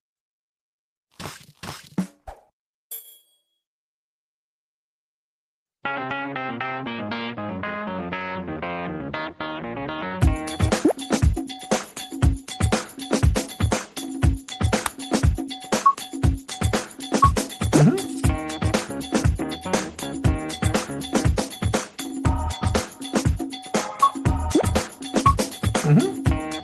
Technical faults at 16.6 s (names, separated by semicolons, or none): none